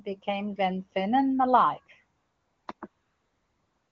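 The phone's silence detection stopped sending speech frames three times, and the receiver substituted AMR comfort noise: 2.19 to 2.67 s, 2.73 to 2.81 s, and 2.87 s to the end. The real background gives way to a smooth, steady synthetic hiss that switches in and out.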